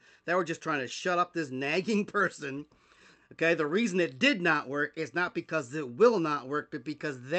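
No technical faults can be heard in this speech; it has the band-limited sound of a normal call connection.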